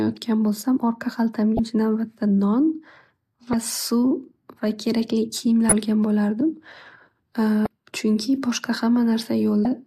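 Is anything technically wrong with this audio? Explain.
Yes, there's damaged data in the compressed stream, giving brief 30 ms glitches at 1.56, 3.51, 5.69, 7.63 and 9.63 s, roughly every two seconds. Corrupted bytes make the decoder misread those frames and lose sync until it finds the next header, producing a brief glitch in the speech.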